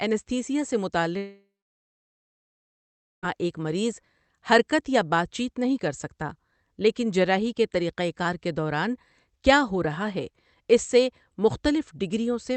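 From 1.17 to 3.25 s the packet stream likely stopped in a long network dropout, and about 2.1 s of speech never arrived. The receiver first stretches the last sound into a fading buzz for roughly a third of a second, then leaves about 1.75 s of silence before speech resumes, with the missing stretch simply gone. Throughout, the Opus call path at about 32 kbps keeps the audio band-limited to 8 kHz.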